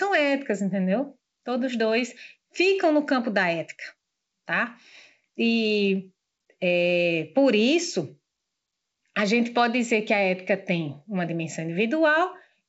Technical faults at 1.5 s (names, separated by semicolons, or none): none